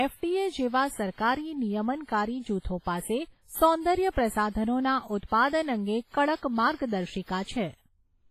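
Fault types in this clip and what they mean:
WMA compression: heavy transform-codec damage runs through the whole speech clip, with a ringing, washy quality and hiss that swells and recedes with the signal, and nothing above 15.4 kHz; this is likely a low-bitrate WMA encode, consistent with around 24 kbps.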